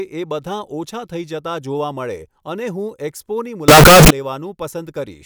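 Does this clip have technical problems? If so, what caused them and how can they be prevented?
Yes. From 3.68 to 4.10 s the speech becomes very loud, harsh and square-edged, with background noise as loud as the speech. This is likely float read as integer. The sign and exponent bits end up setting the level, which fits 32-bit float samples being read as 32-bit integers. To prevent it, state the sample format explicitly and check it wherever audio is read.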